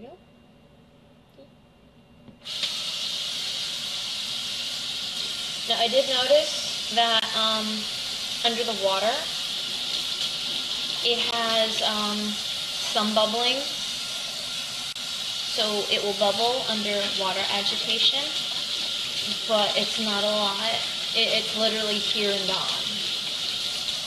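Gaps at joins of encoded pieces appear at 7.20 to 7.22 s (about 27 ms), 11.31 s (about 16 ms) and 14.93 to 14.96 s (about 30 ms). Separately encoded pieces were joined untrimmed, leaving encoder start delay and final-frame padding as brief silences with smeared edges before the sound resumes.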